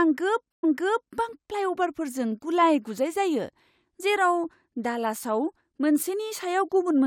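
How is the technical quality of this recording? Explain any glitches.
The recording has one glitch, a stream reconnect between 0.52 and 1.12 s. The playback drops out for 110 ms while the connection breaks and re-establishes. A fresh decoder then starts mid-stream, so the first moment is muted or fades in. The speech resumes about half a second earlier than where it stopped, because the server resent a burst of stream. That repeated stretch sets it apart from a plain dropout, which would lose content instead of replaying it.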